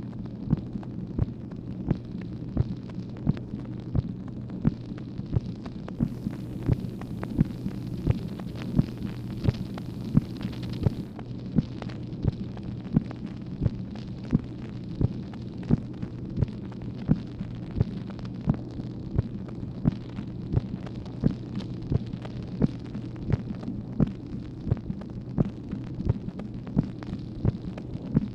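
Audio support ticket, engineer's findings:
Digital radio blending to analogue, 5.91 to 11.2 s. Hybrid tuner lost digital lock. Cross-faded to the same station's FM broadcast over 191 ms, later back. Hiss rises, about 35 dB below programme. Level shifts about 1 dB.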